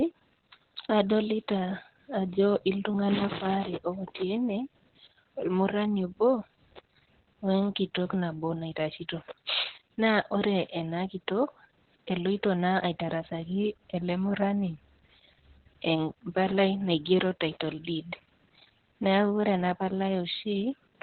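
Speech clip with Opus voice compression throughout: nothing above 4.3 kHz, heavily muffled and hoarse, which points to narrowband SILK at around 8 kbps.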